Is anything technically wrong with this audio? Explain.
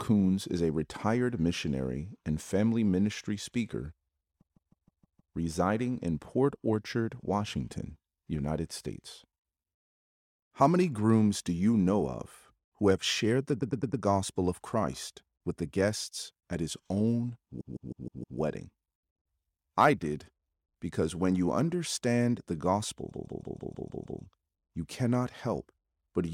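Yes, there are repeated frames. Short runs of encoded frames were played again and again, so the same snippet stutters and lengthens the speech. This happens at 4.40–5.34 s, after "and family ministry speaker" and before "residing in", where a 157 ms block plays six extra times. At 13.60–14.02 s, after "who have shared the", a 105 ms block repeats four times. At 17.60–18.38 s, a 157 ms block repeats five times. At 23.11–24.20 s, after "when you understand the" and before "you cannot", a 157 ms block repeats seven times.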